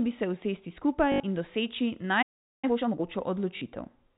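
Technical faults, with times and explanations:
1.12–1.20 s and 3.57–3.61 s, packet loss with last packet repeated: a robotic stutter between "bi se usesti skupaj" and "in doseči", then again briefly. About 80 ms and 40 ms of lost audio were filled by replaying the previous packet, which fits 20 ms packets.
2.22–2.65 s, playback stall: right after "usesti skupaj in doseči" the sound cuts out for about 0.41 s. The player likely ran out of buffered data.
2.65–3.05 s, time-compressed catch-up: the speech then rushes along at twice normal speed with its pitch unchanged, as small pieces are cut and cross-faded to clear the backlog.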